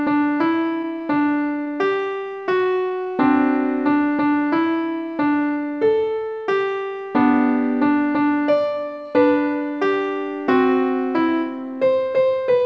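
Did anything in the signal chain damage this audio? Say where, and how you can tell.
Yes, and it's on the network and buffer side of the call. Between 0.66 and 1.68 s there are scattered short gaps: about seven tiny hiccups and ticks, none much over 15 ms, adding up to roughly 50 ms. That's about 5% of that second. Packets went missing or arrived late, and the receiver papered over each hole by carrying the last bit of sound forward. You get brief smears rather than dropouts. The band stops at 8 kHz, which fits a G.722 call path at 64 kbps.

From 2.41 to 3.07 s you can hear a jitter buffer slow-down. The audio drags to about 93% speed with no change in pitch, stretching that stretch by 56 ms. Sounds get drawn out. The buffer had run low, or had just raised its target delay, so the receiver repeated single pitch periods and slivers of pauses to rebuild its reserve. That's why the timing sags while the pitch stays put.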